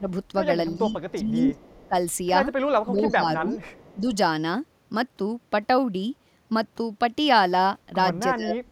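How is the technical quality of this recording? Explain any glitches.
The recording has two recurring call-processing glitches. The speech dips repeatedly, and a faint delayed echo appears twice.

Speech suppressed in double talk occurs at 0.0–0.08, 0.77–1.56, 1.88–1.94, 2.85–3.55, 3.95–4.05 and 8.35–8.72 s. The speech drops by about 10 to 15 dB, likely because an echo canceller mistook simultaneous talking for echo and attenuated both.

Echo leak occurs at 1.57–1.88 and 3.51–3.96 s. A copy of the speech delayed by 352 ms returns about 30 dB down, likely loudspeaker pickup that the echo canceller failed to remove.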